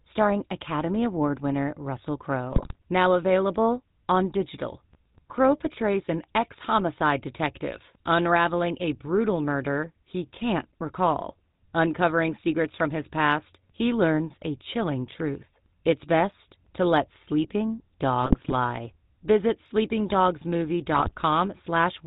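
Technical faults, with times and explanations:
Throughout: GSM full-rate codec. The sound is plainly buzzy and gravelly, with a roughness that fits a 13 kbps GSM full-rate stream. The codec rebuilds the vocal tract as a filter and drives it with a sparse, regularly spaced pulse excitation that keeps only one sample in three, so fine detail is lost. On a spectrogram, energy stops at a hard ceiling at 4 kHz, and the harmonics below it look coarse and grainy rather than smooth.
2.52–2.76 s, 18.22–18.53 s (just after "best to let sleeping"), 20.94–21.15 s: GSM bit errors. Each burst of about 0.2–0.3 s breaks into squawks, pops and gargling. Corrupted bits reach the decoder and scramble the filter, pitch and gain values, which fits around 10–15 damaged frames per burst. On a spectrogram, formants jump or smear in blocky frame-sized patches. On the waveform, level spikes and jagged envelopes appear in those spans.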